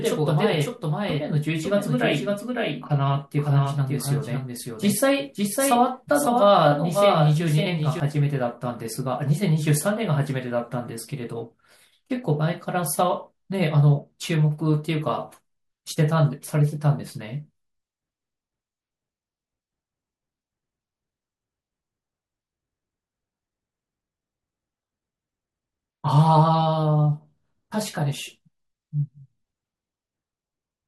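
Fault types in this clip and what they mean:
Doubled audio track: A full-band copy of the speech trails the original by about half a second. It is roughly 5 dB quieter, with no echo decay. It runs from the start and stops abruptly at 8.0 s, likely from a slower second capture path.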